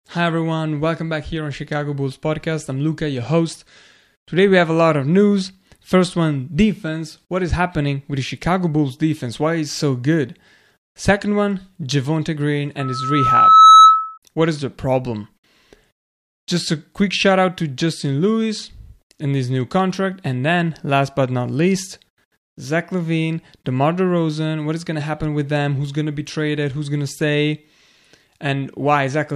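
Loudspeaker feedback squeal runs from 12.79 to 14.18 s. A microphone is picking up the loudspeaker it drives, and at 1.3 kHz the loop gain tops unity, so that frequency keeps reinforcing itself on each trip around. It is heard as a pure tone that rises over roughly a second into a piercing squeal, ending up about 15 dB louder than the speech.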